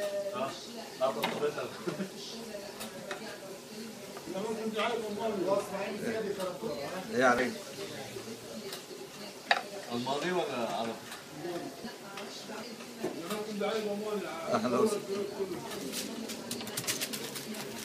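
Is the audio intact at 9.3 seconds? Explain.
No. At 9.29 s there is an abrupt jump in the sound, with no gap of silence, as though roughly 50 ms of audio has been skipped. This is likely a dropped buffer (overrun): the samples were overwritten before the software collected them, so the two sides are spliced together directly. On a waveform this shows as a sudden discontinuity in shape and level; on a spectrogram it appears as a thin vertical broadband line, with the patterns on either side not lining up.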